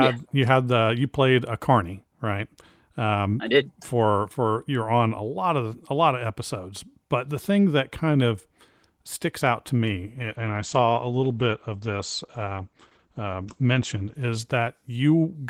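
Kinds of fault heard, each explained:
Call bitrate drop: from 9.83 s, just after "of sticks out to", the encoder is starved, dropping from 32 to 12 kbps, so the speech goes coarse and muffled as the top end is cut from 20 kHz to 8 kHz, sitting at its worst for about 4.3 seconds until 15.23 s.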